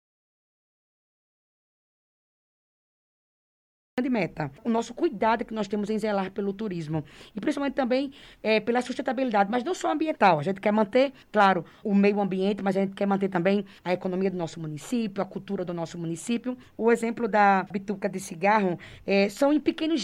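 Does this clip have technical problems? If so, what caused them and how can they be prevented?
Yes, there's an audio dropout to silence from the start until 3.98 s, pure silence with no room tone, likely a lost input or stray mute. Check connections and mute status before hitting record.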